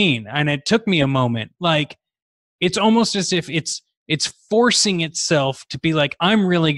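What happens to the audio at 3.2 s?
Nothing goes wrong at 3.2 s; the speech carries straight through that moment with no dropout, click, glitch or other disturbance.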